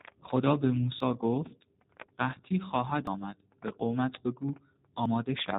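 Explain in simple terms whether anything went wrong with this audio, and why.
The speech was squeezed through the G.729 codec, a low-rate phone-call coder that rebuilds the voice from a rough model instead of sending it whole. It cuts everything above about 4 kHz, so the speech sounds muffled, slightly rough and synthetic.

Four times the recording software likely fell behind and lost a chunk of audio, a dropped buffer (overrun). At 1.00, 3.07 and 5.06 seconds about 40 ms vanished, and at 2.07 seconds about 20 ms. Each is heard as a small jump forward in the sound.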